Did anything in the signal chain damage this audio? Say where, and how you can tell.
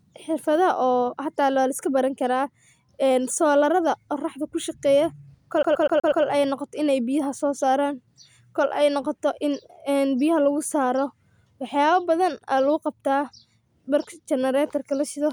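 Yes. A CD stuck on one turn damages the speech from 5.63 to 6.25 s, at the playback stage. The same 0.12 s slice of sound repeats five times, each pass ending in a brief mute before it starts again, producing a fast, perfectly even stutter. That regularity points to a scratch on the disc throwing the laser back one track at the same spot on every rotation, so the player keeps rereading one turn instead of advancing.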